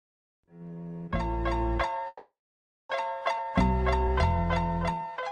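From 2.07 to 2.92 s there is a call audio freeze: the last sound is stretched into a fading buzz, then about 0.6 s of silence, adding 0.82 s of delay with nothing lost. The likely cause is packets held up long enough to empty the jitter buffer. On a spectrogram, a smeared tail dissolves into a blank band.

At 3.37 to 3.52 s the playback skips ahead. Roughly 0.4 s of audio is dropped, and the two sides are joined through only a brief bridge of a few tens of milliseconds. The waveform shows an abrupt seam, and the spectrogram shows a sudden change of pattern with no pause.

From 4.95 to 5.18 s a jitter buffer slow-down plays the audio at 79% speed, adding 58 ms by repeating single pitch periods. The sound is drawn out at unchanged pitch. The spectrogram shows the same harmonics stretched along the time axis. Throughout, the spectrum stops near 12 kHz, which fits Opus at a low call bitrate.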